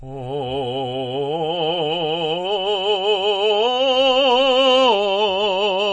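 A music clip carrying plainly audible MP3 compression damage from start to finish, likely from encoding at a very low bitrate, which fits something near 32 kbps. Nothing survives above 8.4 kHz, so the top end sounds dull and boxed in, and the thinned-out detail below that takes on a watery, swirling quality. On a spectrogram this shows as a flat ceiling at 8.4 kHz with patchy, flickering holes where weak components drop in and out between frames.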